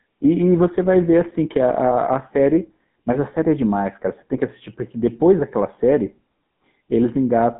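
Throughout, GSM full-rate codec damage gives the speech a plainly buzzy, gravelly roughness from coarse pulse-driven excitation. A spectrogram shows nothing above 3.8 kHz.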